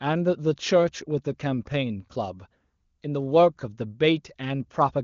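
No technical faults can be heard in this speech clip. It carries the bandwidth of AMR wideband (HD Voice) coding, and its clarity points to one of the codec's higher rates, around 23.85 kbit/s, with any coding damage faint at most.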